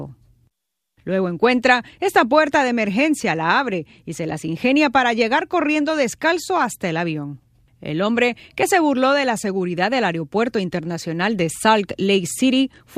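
Speech, with no audible faults.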